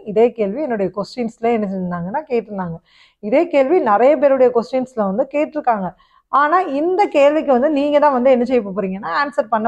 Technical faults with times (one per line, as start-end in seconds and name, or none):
none